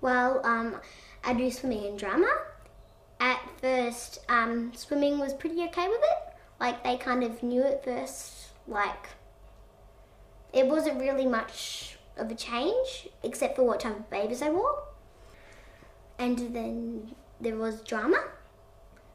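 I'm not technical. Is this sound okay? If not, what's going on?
Yes, this sound is okay, and there's nothing going on that needs fixing.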